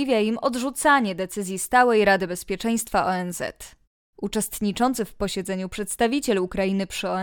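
No technical faults can be heard anywhere in this speech recording. There is nothing to place on the timeline and no mechanism to explain.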